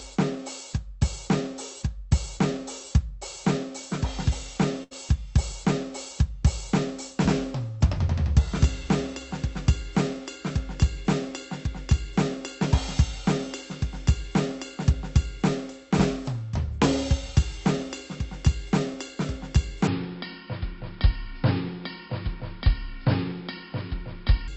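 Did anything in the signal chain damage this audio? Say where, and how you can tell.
Yes, first at the network stage: a burst of packet loss at 4.83 to 4.93 s. The music freezes into a held, fading tone for about 74 ms, the receiver stretching the last sound, then it picks up roughly 80 ms further on, with that stretch gone.

The bigger one is a section at the wrong speed, from 19.87 s to 24.48 s. Everything drops to 0.664 times speed, sagging slower and about seven semitones lower together, likely a playback or editing step running it against the wrong clock.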